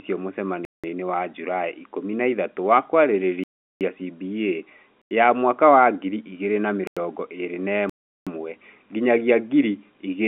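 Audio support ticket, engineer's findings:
Block of digital silence, five dropouts: 0.65–0.84 s (186 ms), 3.44–3.81 s (372 ms), 5.02–5.11 s before "ya mwaka wa ngiri", 6.87–6.97 s after "wa ngiri igĩrĩ na", 7.90–8.27 s (372 ms). Flat waveform with vertical edges; full-band blank columns on the spectrogram within the telephone band. Output buffer likely not filled in time. Gap lengths of about 93, 186 and 372 ms fit buffers of 4096, 8192 and 16384 samples.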